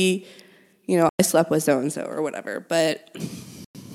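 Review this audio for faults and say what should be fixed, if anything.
Twice the speech cuts to sudden silence, from 1.09 to 1.20 s and from 3.64 to 3.75 s, each gap about 102 ms, and picks up further along as though it had kept playing underneath. This is likely a Bluetooth dropout: audio packets reached the headphones too late and were discarded, and each gap's length fits roughly five lost packets. To prevent it, keep the headphones close with a clear line to the source and away from crowded 2.4 GHz traffic.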